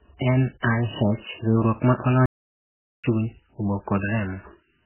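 Throughout the speech, the treble stops dead and what remains sounds watery and swirly, which points to MP3 compression at a very low bitrate near 8 kbps. Unlike a plain low-pass filter, the encoder likely starved of bits and dropped weak frequency lines, so they flicker from frame to frame and smear consonant attacks.

From 2.26 to 3.04 s the sound halts for about 0.78 s, a playback stall that likely happened when the player ran short of data.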